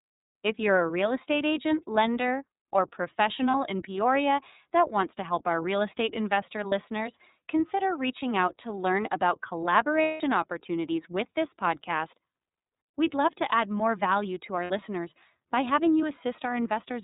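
From start to end the speech runs through the iLBC codec in 30 ms frames, which fits its 13.33 kbps mode. It sounds rough and synthetic, and the spectrogram shows a hard ceiling at 4 kHz.

Lost iLBC frames appear at 3.51 s, at 6.69 s after "our real estate investor", and at 14.64 to 14.71 s after "more value to our". The longest runs from 10.02 to 10.21 s, between "out to learn about" and "opportunities with this podcast". In each gap the decoder repeats the last pitch cycle with noise, giving a held, buzzy vowel. The spectrogram shows frozen harmonic stripes that fade over the 180 ms gap, and the speech recovers at once.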